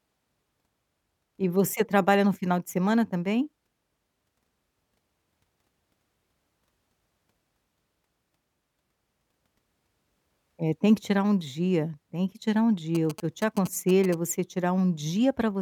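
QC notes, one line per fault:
12.95–14.15 s, GSM signalling bursts: a galloping dit-dit-dit of short buzzes at about 217 Hz sits roughly 15 dB under the speech. A nearby 2G handset is radiating short groups of transmit pulses, and the audio circuitry rectifies that RF, turning the pulse envelope into audible clicks with a 217 Hz buzz. The brief, clustered pattern rather than a steady drone suggests the phone was signalling to the network, not carrying a call.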